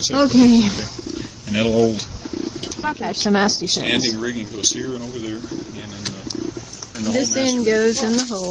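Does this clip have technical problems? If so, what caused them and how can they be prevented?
Yes. A skip ahead at 2.83–2.85 s drops roughly a second of audio. The audio was dropped, so the waveform splices abruptly with no silent gap. Prevent it with a larger buffer ceiling and gradual time-scaling instead of discarding.

Two jitter buffer speed-up passes, at 2.93–3.67 s (124% speed, about 0.2 s removed) and 4.17–5.35 s (109%, about 0.1 s), cut pitch periods after bunched packet arrivals. On a spectrogram, harmonics stay level while events crowd closer together. Prevent them by stabilising network delay and limiting playout acceleration.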